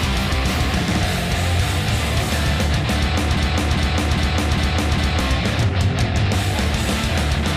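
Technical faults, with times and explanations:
3.37–5.20 s, broken-record loop: a stall likely kept resending the last 0.40 s fragment, which repeats exactly five times back to back, replacing the audio due there.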